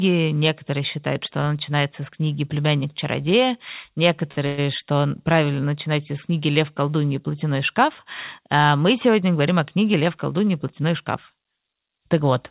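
At 4.32 s a short stall from a late packet holds the sound for 43 ms until the packet arrives. Nothing is lost, and the brief stretched sound, without a fading buzz, sets it apart from a freeze.

From 4.46 to 4.60 s comes a call audio freeze, likely from packets held up in transit. The last sound carries on for 112 ms as a buzz that fades without reaching silence. This inserts a gap rather than cutting anything.

From 9.56 to 10.47 s a jitter buffer speed-up runs the audio at 106% by trimming roughly 70 ms in tiny pitch-period pieces. It sounds hurried, but the pitch stays the same, unlike a resampling speed change.

Throughout, the call path passes nothing above 4 kHz, which fits G.711 mu-law at 64 kbps.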